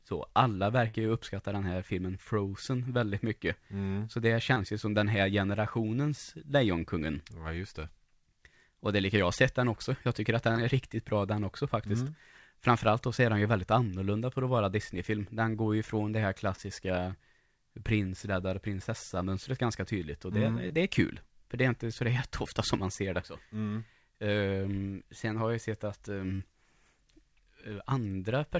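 A burst of packet loss at 0.88 to 0.96 s drops about 60 ms of speech. The receiver stretches the preceding sound into a fading held sound before the speech jumps ahead.

Short concealed packet loss follows at 4.54, 10.52, 16.56 (after "ju från det här"), 20.68 (between "ganska tydligt och det" and "det är kul") and 26.36 s (after "har jag sett att"). Each gap of about 20 to 40 ms is patched by extrapolating the last sound, leaving a brief smear or wobble. All of this sits within band-limited G.722 call audio, with nothing above 8 kHz.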